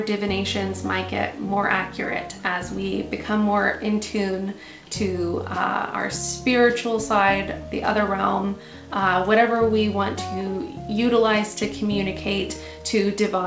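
No faults can be heard anywhere in this audio.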